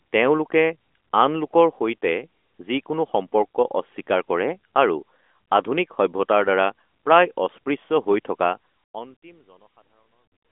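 Nothing here counts as a fault: the speech comes through the narrowed band of a mobile phone line, and the level eases away in a gentle fade-out over roughly the last two seconds, ending at about 10.5 s.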